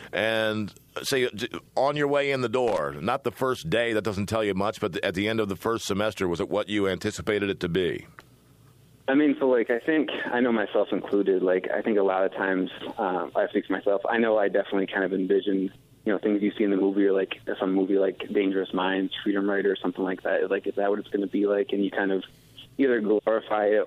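A worn or dirty contact in the signal path briefly lost and regained connection between 2.68 and 2.78 s, producing loose connector crackle. For roughly a tenth of a second the audio was chopped on and off in rapid, uneven bursts. The result is a short, irregular scratching crackle laid over the sound.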